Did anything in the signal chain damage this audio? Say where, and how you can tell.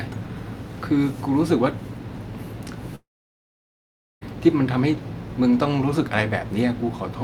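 Yes. At the network stage, a long network dropout is the likely cause: nothing arrived from 2.95 to 4.23 s. The receiver briefly stretched the last sound into a fading buzz, then gave about 1.2 s of silence, and speech resumes with 1.26 s missing.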